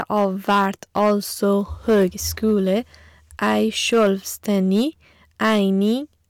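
Harsh crackle rides on the louder syllables from start to finish of this speech clip. The cause is hard clipping: the signal was driven about 8 dB past what a stage in the chain could pass, so its peaks were sliced flat. Only a few percent of samples hit that ceiling, but each flattened top sprays high harmonics across the spectrum.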